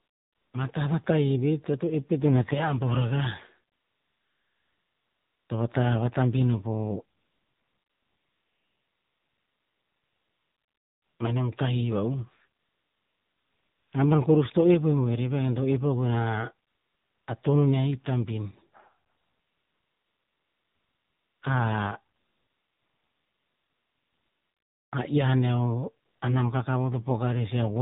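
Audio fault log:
throughout, AMR narrowband mobile codec: speech coded at 7.4 kbps and cut off above 4 kHz, leaving a muffled, buzzy, plainly synthetic voice.
0–0.54 s, 3.74–5.50 s (ending just before "to vata vatabin o"), 7.18–11.20 s, 12.60–13.92 s, 16.68–17.28 s, 19.08–21.42 s, 22.16–24.92 s, 26.06–26.22 s, AMR comfort noise: speech frames stop in pauses and the receiver fills them with a smooth, steady synthetic hiss that switches in and out.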